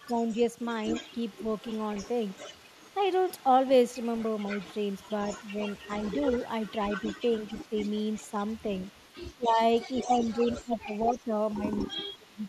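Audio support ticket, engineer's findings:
Echo leak: faint delayed copy of the speech trailing the talker by about 251 ms, heard 0.00–2.94 s and 3.29–9.52 s at about 20 dB under the speech. It gets louder later: about 10 dB down at 9.94–10.76 s, about 15 dB down at 11.07–12.48 s. Likely the far end's echo canceller on a loudspeaker setup, not fully cancelling what its mic picks up and sending the remainder back.

Speech suppressed in double talk: short dips in the talker's level while the other side talks. There are drops of roughly 10 dB at 0.06–0.11 s and 2.37–2.45 s, and of roughly 15 dB at 9.37–9.59 s. The worst stretch is 9.95–12.46 s, down by roughly 25 dB and affected for around a second and a half in total. Likely the same canceller, unable to tell local talk from echo and ducking both.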